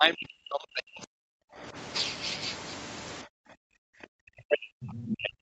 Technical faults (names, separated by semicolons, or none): speech suppressed in double talk; other side's voice leaking through